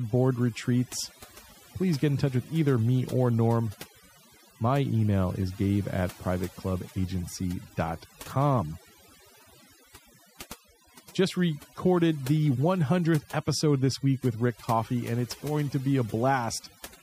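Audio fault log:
throughout: overdone noise removal. Noise reduction set too aggressively shuts off individual frequency bands wherever they sit close to its noise estimate, taking quiet parts of the speech along with them. The background drops and breaks up into twinkling specks.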